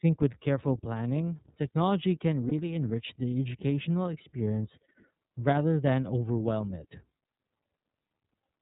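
Speech coded with the iLBC codec runs through the whole recording. The band stops at 4 kHz, so the sound is dull and narrowband. The codec damage is plainly audible: a rough, slightly synthetic edge sits on every phrase. Each frame is coded on its own, from its own excitation, with no help from the frame before. The character fits iLBC in its 30 ms frame mode at 13.33 kbps. There are lost iLBC frames from 2.48 to 2.53 s. The gap lasts about 30 ms, which points to a single missing frame. The decoder fills it by repeating the last pitch cycle mixed with noise. It sounds like a brief held, buzzy vowel. Because iLBC frames stand alone, the speech comes back right almost at once after the gap.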